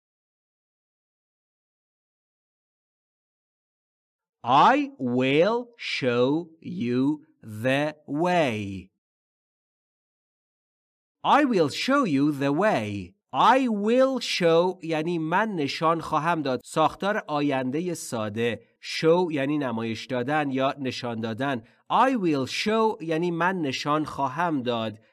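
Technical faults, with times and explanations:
4.48–7.03 s, channel delay (comb filtering): one channel lags by roughly two samples before mono summing, cancelling highs near 10 kHz for a dulled top.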